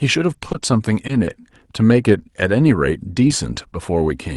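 From 0.33 to 1.42 s the speech turns choppy and robotic, with small pieces dropping out and a stuttering edge. This is repeated packet loss: six separate gaps, none longer than 20 ms, each patched by stretching the preceding sound before the next gap arrives. Roughly a tenth of that stretch is synthesized fill, about 100 ms in total covering 60 ms of missing audio, which is enough to roughen the speech.

Later there are two brief smears, from 3.28 to 3.32 s and from 3.54 to 3.58 s, each heard as a quick wobble in the speech. These are short concealed packet losses: about 20 ms of audio failed to arrive in time at each point. The receiver carried the previous sound across the hole, continuing its pitch or shaping noise, then blended back into the real signal. The Opus call path underneath runs at about 40 kbps, with its top end stopping near 12 kHz.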